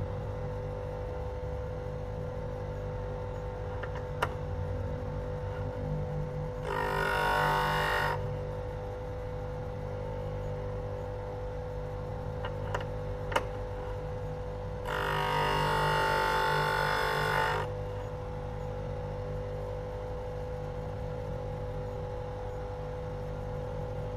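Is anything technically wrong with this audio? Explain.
No, the audio shows no technical problems anywhere in the recording.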